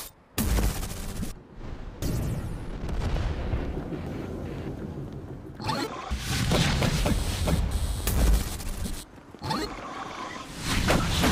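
Brief chirps or blips break into the sound at 2.02, 4.07 and 6.11 s, about two seconds apart. They come from damaged data in a compressed stream: corrupted bytes make the decoder misread those frames, lose sync and search for the next valid frame header.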